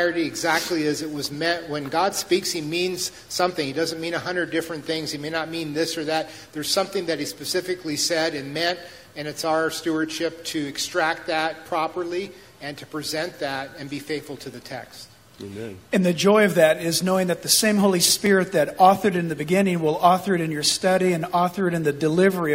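Two tiny skips where the waveform jumps land at 6.28 s and 18.27 s. They come from overlap between stream segments: adjacent 6-second segments carried overlapping timestamps, so the player trimmed a few milliseconds of genuine, undoubled audio at each join.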